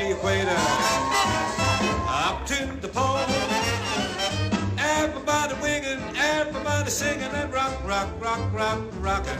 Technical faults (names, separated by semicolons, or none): damaged data in a compressed stream